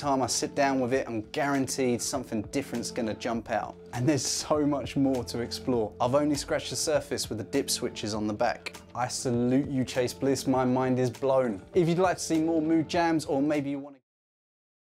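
No faults found; the only level change is a smooth fade-out beginning around 13.5 s and finishing at 14.05 s, with no click or hard edge.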